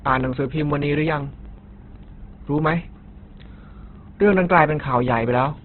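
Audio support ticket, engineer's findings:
Speech band-limited throughout, nothing above about 4.2 kHz, heavy grainy roughness. Likely Opus compression at a low rate, which fits roughly 12 kbps in CELT music mode: bands filled with noise or folded content, so tones turn gritty rather than swirly.

Regular ticks from 0.08 s to 5.58 s, every 0.125 s (eight a second), audible only under signal. Periodic USB or driver dropouts: a background task stalling the bus or driver, each time dropping about 2 ms to silence. Dozens of hits across the clip.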